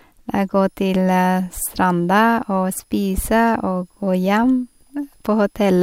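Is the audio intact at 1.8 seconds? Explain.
No, at 1.8 s there's a switching supply whistle running underneath the speech. It starts at about 0.56 s and carries on to the end of the clip. A switching power supply is running in an audible burst mode or beating with another one, so you get a faint high whistle sitting well below the speech. Its pitch wanders between roughly 4.9 and 5.3 kHz as the load shifts.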